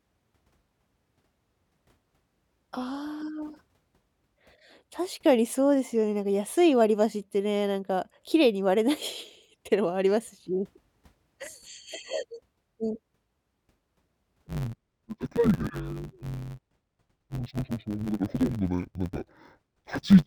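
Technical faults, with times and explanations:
14.47 to 20.27 s, interleaved audio read as planar: speech turns dull and robotic, buzzing near 94 Hz, because each 10.67 ms block's alternating left-right samples are split into halves.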